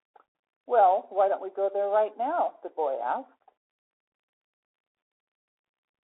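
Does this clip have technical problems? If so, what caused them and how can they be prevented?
Yes. Throughout the speech, a Bluetooth CVSD headset codec narrows the sound to roughly 300 Hz to 3.6 kHz, consistent with a 64 kbps one-bit delta stream. Unlike a clean telephone band-limit, its adaptive step leaves scratchy s sounds, granular hiss and distorted loud peaks. Recording through the headset's wideband mode or a wired microphone prevents this.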